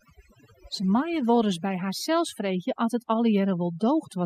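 From start to finish, overdone noise removal strips individual frequency bins that sit near the estimated noise floor, taking soft speech detail with them. Gaps fill with near-silence and sparkling specks. A spectrogram shows scattered isolated dots and ragged, hollowed-out harmonics.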